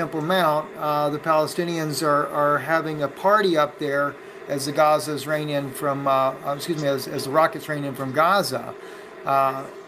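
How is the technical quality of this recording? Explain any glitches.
No technical glitches can be heard in this recording.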